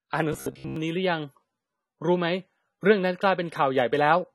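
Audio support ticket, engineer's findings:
Dull, band-limited speech for the whole clip. Plainly audible AAC compression damage: smeared detail, fizzy and warbling sibilants. Likely component: AAC-LC encoder running at a low bitrate, consistent with about 32 kbps. At that rate the encoder drops the high band and quantises the remaining frequency lines coarsely. Result: a lost top end and holes in the spectrum.

Robotic sound from repeated short buffers, 0.33 to 0.76 s. Speech collapses into a rigid metallic buzz at 66.7 Hz, which still roughly tracks the speech contour. Likely cause: playback starved of new data, looping the last buffer of about 15 ms. That matches the buzz period. Most of the segment is repeated material, so real audio is skipped.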